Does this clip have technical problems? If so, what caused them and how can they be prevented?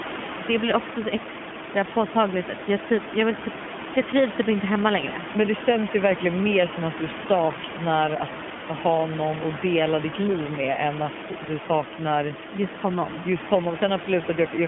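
Yes. iLBC codec damage runs throughout: the speech is band-limited to about 150 Hz to 3.4 kHz and sounds plainly rough and synthetic, as each 20 ms frame's excitation is coded independently at a rate that fits iLBC's 15.2 kbps mode. A spectrogram shows energy cut off sharply above 3.4 kHz, with smeared, grainy harmonics. Prevent it by negotiating a wideband codec such as Opus for the call.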